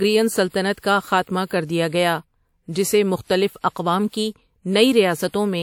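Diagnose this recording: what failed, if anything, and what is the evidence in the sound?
The codec stage failed with pre-echo. From 4.08 to 4.13 s a short hiss runs about 53 ms ahead of a sharp speech onset, which sounds softened. Quantisation noise sized for that attack was spread across its whole transform block, including the quiet stretch before it.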